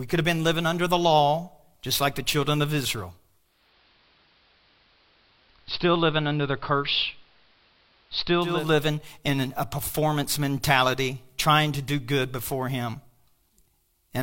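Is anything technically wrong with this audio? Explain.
Yes. From 3.38 to 8.74 s, just before "in a performance mentality", a digital radio blend to analogue occurs. The receiver loses digital and cross-fades over 372 ms to AM, so the speech dulls, drops about 2 dB, and gains faint hiss.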